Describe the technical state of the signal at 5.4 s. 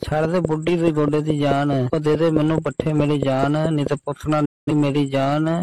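At 5.4 s the signal is intact, with no dropout, distortion or other fault audible at that point.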